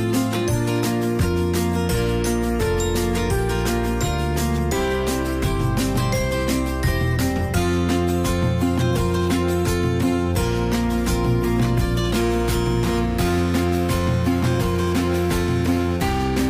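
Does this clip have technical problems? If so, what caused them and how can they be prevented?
Yes. Periodic clock jitter runs from 12.19 s to the end at 16.50 s. Interference wobbles the converter's sampling clock at about 2 kHz, so every component of the sound gains sidebands at that spacing, stronger at higher frequencies, giving a rough, metallic edge. To prevent it, use a clean, well-isolated clock source and keep interfering signals away from the converter's clock lines and power supply.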